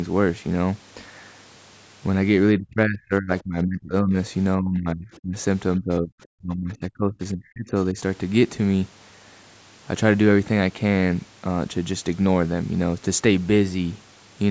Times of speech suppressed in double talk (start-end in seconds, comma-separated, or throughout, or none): 2.56-4.16, 4.57-5.36, 5.77-7.97